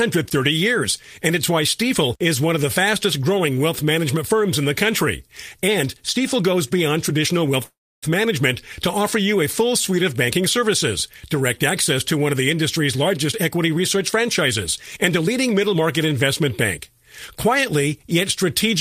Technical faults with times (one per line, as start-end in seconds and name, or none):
7.63-8.05 call audio freeze
12.96-14.28 jitter buffer speed-up
14.78-15.76 jitter buffer speed-up